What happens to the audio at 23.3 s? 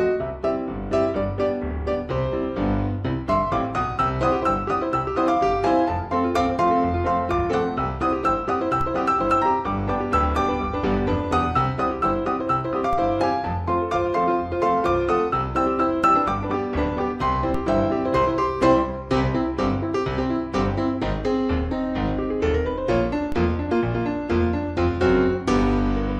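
At 23.32 s a DC step occurs: the waveform's zero line suddenly jumps by about -18 dBFS and then drifts back as a high-pass around 5 Hz bleeds the offset away. The sudden shift is heard as a single low thump, while the sound itself carries on unchanged. Unlike an ordinary click or a dropout, nothing is missing or distorted in the content; only the baseline moves.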